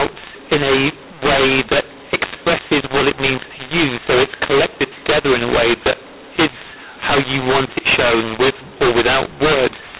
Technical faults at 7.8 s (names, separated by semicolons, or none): mu-law and A-law mixed up